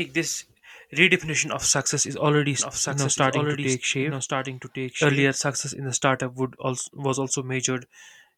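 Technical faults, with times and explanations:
2.59 to 5.27 s, doubled audio track: a second full-band copy of the speech runs about a second behind the original, a few decibels quieter, with no decay or added room colour, so it sounds like a clean overlapping repeat rather than an echo. It starts and stops abruptly at those points. The likely cause is the same signal reaching the mix twice, once directly and once through a slower capture path or misaligned edit.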